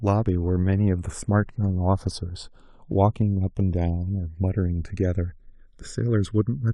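Speech, with the channels drifting apart throughout. Separate clocks, off by around 100 ppm, slide one channel under a millisecond behind. In mono, this sweeps comb notches like slow flanging.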